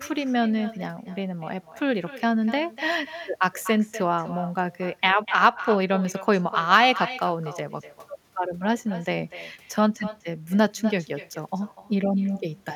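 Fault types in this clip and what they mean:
Echo with no canceller: The speech returns as a delayed copy of itself, roughly a third of a second after the original. At the far end, a loudspeaker fed a microphone. Nothing stripped that signal out before it travelled back. The copy sits about 14 dB below the direct speech. It sounds thinner than the original. Every phrase is shadowed this way throughout the clip.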